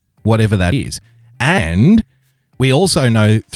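At 0.72 s, just after "whatever that", the speech skips ahead with no gap. It skips again at 1.58 s and 2.6 s. Roughly 70 ms vanishes at the first two and 20 ms at the third. The likely cause is a dropped buffer (overrun), where samples were overwritten before being read.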